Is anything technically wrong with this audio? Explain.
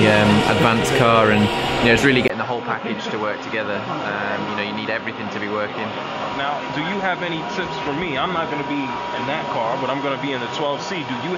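Yes. From 2.28 s to the end, the input likely switched to a poorer device: after a 20 ms gap, the sound loses everything above 6.9 kHz, drops roughly 10 dB, and gains a faint new noise floor.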